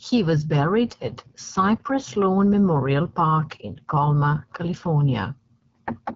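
From start to finish the speech carries AMR wideband (HD Voice) codec damage, and it is plainly audible. The codec models the vocal tract excited by pulses below 6.4 kHz and substitutes shaped noise up to the band edge, and nothing is present above 7.5 kHz. Here the modelling is coarse, giving a rough, raspy texture to the voice, which fits one of the lowest AMR-WB rates, around 8.85 kbit/s.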